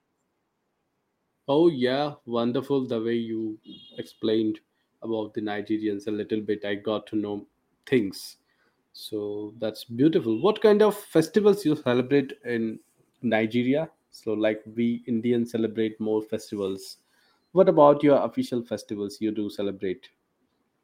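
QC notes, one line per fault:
No faults found in the speech. Nothing here calls for a timed entry.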